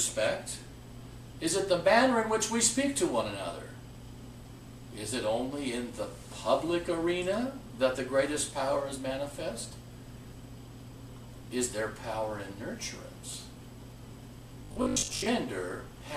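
Robotic sound from repeated short buffers appears from 14.64 to 15.26 s: the sound collapses into a rigid, metallic 50 Hz buzz. The likely cause is starved input, with roughly half the audio replaced by repeats of the last 20 ms.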